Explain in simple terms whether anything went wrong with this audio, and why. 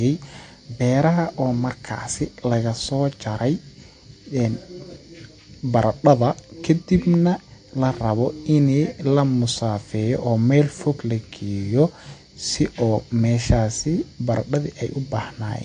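Something did go wrong, and it lasts the whole clip: the speech carries plainly audible damage that points to MP3 compression as the likely cause. Everything above about 9.4 kHz is simply missing, which dulls the s sounds, and the remaining sound has a watery, swirling quality as faint details flicker in and out. A plain treble cut would only sound muffled. This fluttering, underwater texture is what marks it as a squeezed MP3.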